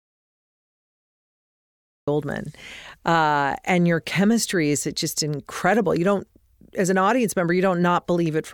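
From the very start until about 2.08 s the clip is an audio dropout to silence: the speech only begins once the signal returns, arriving abruptly rather than fading in. The gap holds no room tone or hiss at all, just silence, so the waveform is flat and the spectrogram is empty across every frequency band. The likely cause is a lost input, through a disconnected device, failed link or mute.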